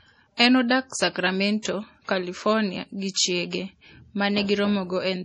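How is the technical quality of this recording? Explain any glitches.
The quality is poor, with heavily compressed speech throughout and three brief smears before sharp onsets.

Throughout, the speech sounds watery and swirly, with brittle, chirpy sibilants and nothing above 10.4 kHz. That points to MP3 compression, likely at a low rate around 32 kbps, cutting treble and dropping weak frequency lines frame by frame.

Pre-echo occurs at 0.37 s, 1.62 s and 3.14 s. A short hiss of about 23 to 30 ms leads each attack, which sounds softened. The codec spread noise across its whole block, ahead of the transient.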